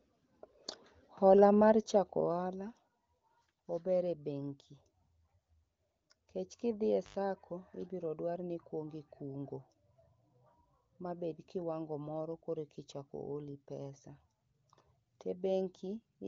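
At about 7.03 s the speech hits an intermittent contact: a loose plug or cable briefly opens, so the sound drops out for roughly 95 ms with crackle at each edge and faint hiss in the gap, ending by 7.17 s. The band stops near 7.4 kHz, as AMR wideband does.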